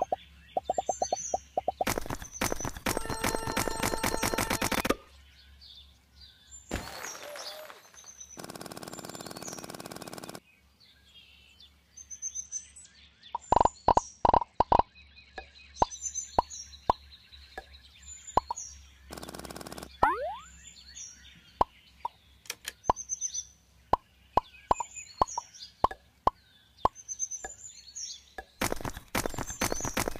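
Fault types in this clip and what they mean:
Bluetooth SBC bit pool drop: from about 12.45 to 15.94 s the link seems to get squeezed, so the encoder starves the top sub-bands and quantises the rest coarsely. The treble goes dull and gritty, which fits a fall from a bit pool around 31 to 10, near 77 kbps.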